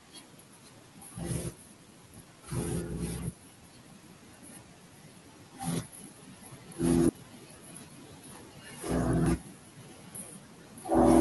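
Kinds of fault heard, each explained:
Damaged data in a compressed stream: brief chirps or blips break into the speech at 0.40, 2.93, 5.10 and 9.26 s, each lasting only a few milliseconds, with a much longer one from 7.06 to 7.09 s. At these points bytes in the compressed stream were lost or corrupted, so the decoder misread the affected frames, lost sync and had to search for the next valid frame header before clean audio resumed.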